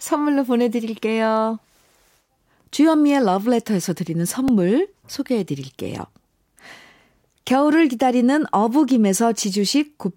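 At 4.48 s a brief click or buzz is heard: a repeated buffer, where a piece about 1.45 ms long, fitting a 64-sample buffer, played twice more because new audio arrived late.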